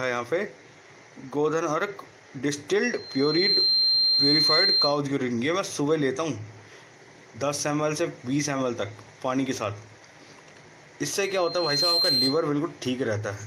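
A piercing 4.2 kHz tone swells over about half a second to sit above the sound, from 2.93 to 5.01 s and again from 11.25 to 12.47 s. This is loudspeaker feedback squeal: the microphone hears its own loudspeaker, and that frequency runs away.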